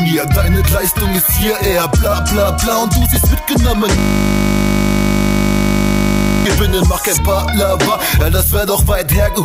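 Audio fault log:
3.99–6.46 s, system hang loop: the system froze while the hardware replayed one 20 ms buffer about 120 times, giving a steady 50 Hz buzz.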